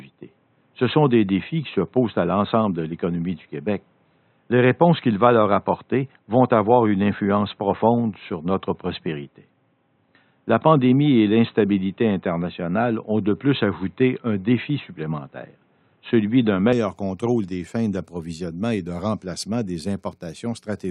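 A speech clip whose input was likely on a poorer device, such as a headset's call profile, until 16.73 s, when it switches back. Until then nothing is heard above 4 kHz, so the sound is dull and boxy, with a faint different noise floor; then, with no gap and a level jump of about 5 dB, it clears at "contrôle des fins d'approvisionnement".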